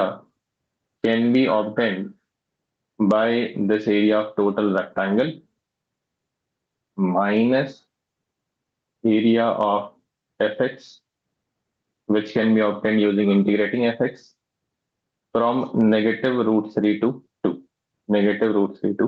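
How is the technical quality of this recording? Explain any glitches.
The recording has one fault that runs through its whole length: gain pumping. The audio is band-limited, with nothing above 8 kHz, which fits a call codec.

Gain pumping, throughout: the gain swings by around 10 dB. Excessive input gain hitting a fast limiter is the likely cause.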